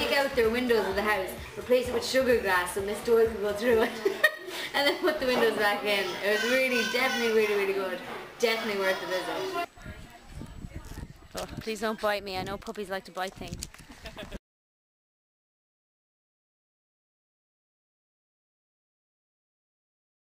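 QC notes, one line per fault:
Throughout, crude rate conversion: a gritty, inharmonic fizz rides along with the sound and grows on loud and high-pitched passages. The sound suggests a conversion from 32 kHz up to 44.1 kHz done by simply repeating the nearest sample, with no interpolation or anti-imaging filter. The uneven repeat pattern, set by the mismatch between the two rates, adds error at roughly 20 dB below the signal and spreads it into tones unrelated to the source.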